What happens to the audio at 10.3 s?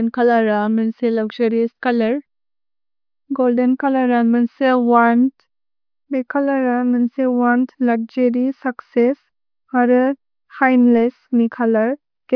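Nothing goes wrong at 10.3 s; the speech carries on intact through that moment, with no dropout, click or distortion.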